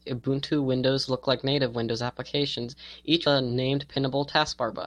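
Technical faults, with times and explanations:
3.25 s, damaged data in a compressed stream: a brief glitch cuts into the speech. Part of the compressed stream is corrupt here. The decoder misreads those frames and loses sync. It then hunts for the next valid frame header, leaving a short glitch.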